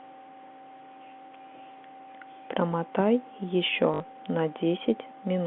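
From 3.94 to 4.00 s, packet loss with last packet repeated makes a 60 ms robotic stutter, which fits three lost 20 ms packets. The run gives a brief 50 Hz buzz.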